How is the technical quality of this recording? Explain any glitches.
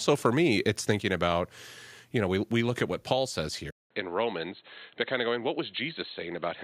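The recording has audible level drops and a clear loss of quality partway through.

At 1.02 s and 2.61 s, the speech level falls suddenly by about 2 dB each time. This sounds like a microphone volume step-down. The call software likely judged the input too hot and cut the device gain in one step.

From 3.70 s to the end, the sound turns dull and boxy after a short silence of about 200 ms. The level drops by roughly 5 dB, and a new noise floor sits well below the speech. The input was likely switched to a poorer device.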